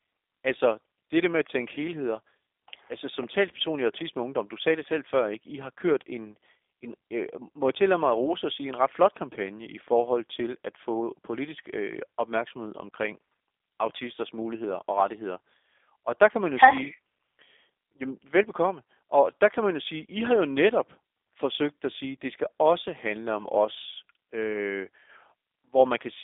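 The speech sounds thin, slightly rough and synthetic from start to finish, with a boxy telephone quality: nothing above 3.7 kHz survives, and the band sits roughly between 300 Hz and 3.6 kHz. The cause is G.729 codec damage, which is plainly audible here. The coder rebuilds each short frame of speech from a vocal tract filter, a pitch predictor and a few pulses rather than the actual waveform, which fits an 8 kbit/s G.729A link.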